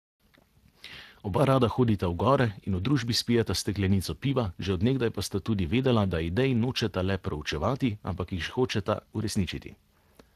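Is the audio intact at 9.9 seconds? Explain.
No. Speex codec damage runs through the whole clip: too few bits for the excitation make the speech hoarse and noisy, fitting roughly 22 kbps, unlike a plain low-pass, which would only dull it.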